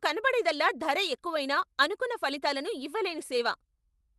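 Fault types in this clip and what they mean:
Clock drift between sender and receiver: Throughout the clip, the sending side's audio clock runs ahead of the receiving side's by roughly 4 percent. The receiver's jitter buffer therefore keeps filling with more audio than it can play out at its own rate. Nothing empties out, but the buffer has to be trimmed again and again, so the speech picks up small, recurring timing hiccups at uneven intervals instead of flowing at a steady pace.
Repeated timing corrections: From about 0.04 s to 4.11 s, the receiver keeps cutting out short slivers of audio so it doesn't fall further behind the faster sender. The net effect is speech playing at about 103 percent of its natural rate. Every correction goes the same way, always dropping material and never repeating it, and they come unevenly spaced. Each cut is tiny, so if they are heard at all, it is as slight stumbles and an unsteady tempo rather than clear gaps.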